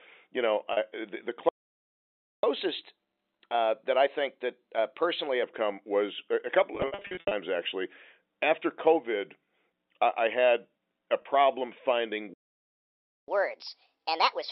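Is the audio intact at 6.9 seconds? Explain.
No. From 6.75 to 7.31 s the audio shows packet loss with pitch repetition: about 350 ms of audio is missing, scattered across that 560 ms span in runs no longer than 70 ms, which fits 10 ms packets. At each gap the receiver loops the last pitch period and fades it over roughly 50 ms. Shorter holes sound like a briefly held, buzzy tone. The longest runs outlast the fade, dip toward silence, and then cross-fade back into the speech.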